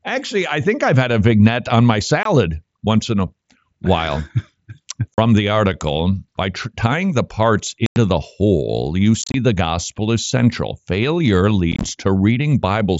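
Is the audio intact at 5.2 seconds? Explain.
No, not quite. Unconcealed Bluetooth headset packet loss punches a hole from about 5.14 to 5.18 s, ending just before 5.2 s. Roughly 37.5 ms of headset audio never reached the phone, which fits a run of about five short mSBC packets, and nothing was filled in. The speech drops out abruptly. On a waveform it is a flat gap; on a spectrogram, a blank vertical slot across the band up to 8 kHz.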